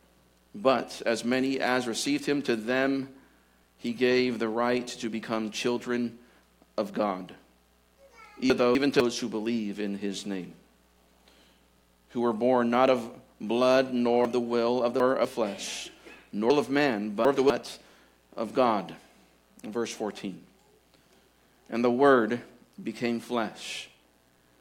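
Chunks out of order at 8.5 to 9.0 s, 14.25 to 15.25 s and 16.5 to 17.5 s: a 250 ms block plays one chunk late in the first, three late in the others, so the sound jumps back and forth, jumbled, across three hard joins.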